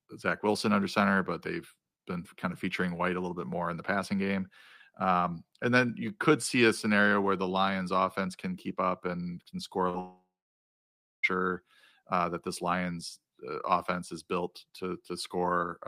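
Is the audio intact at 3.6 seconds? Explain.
Yes, at 3.6 s the speech plays through cleanly, with no audible dropout, click, distortion or other fault at that moment.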